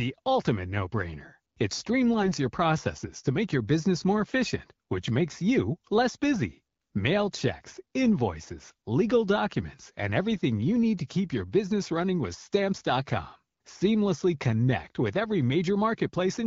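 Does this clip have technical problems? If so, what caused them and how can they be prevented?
Yes. From 2.22 to 2.32 s the speech turns hoarse and gargly for a moment while its pitch and level hold. These are AMR bit errors, which fits a handful of corrupted 20 ms frames on a weak radio link. Around 4 percent of the less protected bits arrived flipped, yet the checksum on the critical bits still passed, so the decoder used misplaced pulses and wrong gain and spectral values. The AMR wideband codec around this burst, at 12.65 kbit/s, keeps the speech clear. Better radio coverage, stronger channel coding or a lower codec mode with more error protection would prevent it.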